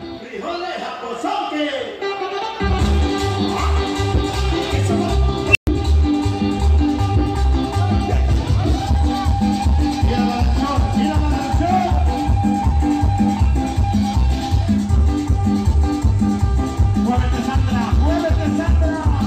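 Starting at 5.50 s, a high tone near 3 kHz swells over about 55 ms to a loud squeal, then drops to roughly 120 ms of silence, ending by 5.67 s. This is an unstable filter.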